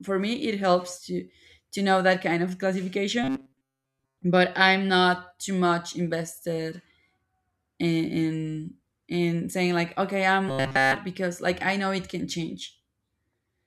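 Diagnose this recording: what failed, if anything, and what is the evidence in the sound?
Robotic sound from repeated short buffers occurs at 3.24–4.22 s, just before "but i'm not too", and at 10.49–10.95 s, between "saying like okay i'm" and "because like i know". Both become a rigid 134 Hz buzz built almost entirely from repeats. The likely cause is a driver or buffer underrun looping a chunk of about 7.5 ms. A spectrogram shows flat, evenly spaced harmonics at 134 Hz multiples. The waveform shows one near-identical cycle tiled throughout.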